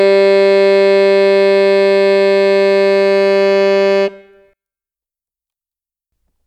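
From 4.53 s to 6.12 s, the music shows the signature of one channel inverted, most likely a polarity flip on one side of the stereo pair. Because one side arrives upside down, the material shared by both channels cancels when they are summed, and the level drops by about 24 dB. Centred parts and the low end all but disappear, leaving only a faint residue of whatever differs between the two channels.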